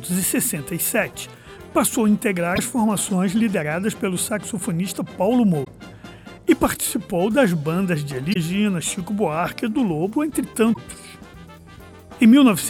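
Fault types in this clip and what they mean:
Damaged data in a compressed stream, at 2.52, 5.61, 8.30 and 10.70 s: corrupted bytes make the decoder misread frames and resync, giving brief glitches lasting about 70 ms each.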